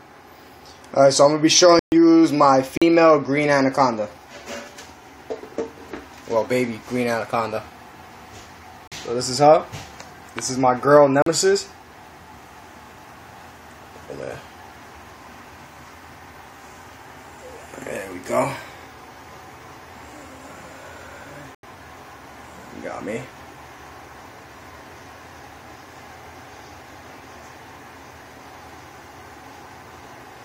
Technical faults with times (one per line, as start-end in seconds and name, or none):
1.79-1.92 block of digital silence
2.77-2.82 block of digital silence
8.87-8.92 block of digital silence
11.22-11.26 block of digital silence
21.55-21.63 block of digital silence